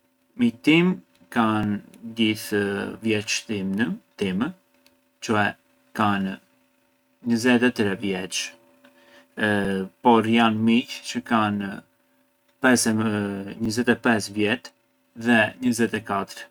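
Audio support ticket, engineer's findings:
Overlapping chunks at 1.63, 5.64, 9.65 and 13.65 s: short stutter-click, every 4 s. Chunked processing or transport; each 4 s chunk starts about 7 ms before the previous one ends, so that sliver of speech plays twice at each join.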